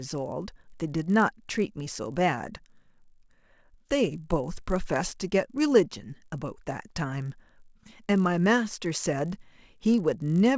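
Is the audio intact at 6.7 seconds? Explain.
No. At 6.7 seconds the speech carries the same fault that runs through the whole clip: a resampler restarted on every block. The conversion was done one 20 ms chunk at a time, with no carry-over between chunks, which fits a 44.1 kHz to 16 kHz rate change. Each chunk's edges were computed against missing or wrong neighbouring samples, leaving a small error at every boundary. The result is a buzz at 50 Hz, the block rate, heard only while sound is present.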